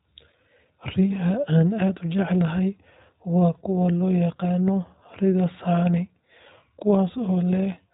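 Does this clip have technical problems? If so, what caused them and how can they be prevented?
Yes. Throughout the speech, the iLBC codec is plainly audible. Nothing passes above about 3.8 kHz, and the voice has a rough, slightly synthetic grain. The codec rebuilds the excitation of each short frame on its own, and the texture here fits 20 ms frames at roughly 15 kbps. A simple low-pass or telephone filter would cut the top just as sharply but leave the remaining band smooth. The added roughness points to coding. To prevent it, carry the call on a wideband codec such as Opus at an adequate bitrate instead of iLBC.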